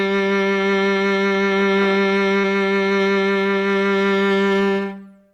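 A music clip with one short concealed packet loss around 2.41 to 2.45 s. About 20 ms of audio didn't arrive at the decoder in time, so the receiver patched the gap by extending what it had just played, then crossfaded back into the real signal. You hear it as a quick smear or little wobble in the music rather than a clean dropout.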